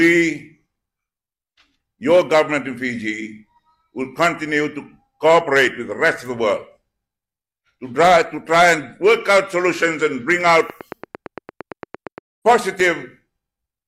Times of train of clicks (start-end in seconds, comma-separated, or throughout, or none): 10.47-12.19